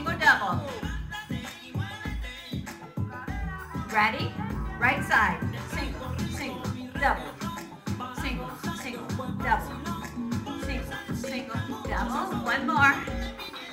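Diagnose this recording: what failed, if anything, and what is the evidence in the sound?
A train of clicks runs from 11.70 to 13.50 s: about ten evenly spaced ticks at roughly 4.5 per second, each about as loud as the sound itself. That steady, same-shaped pulsing points to a likely source of interference from nearby equipment or a faulty connection or power supply.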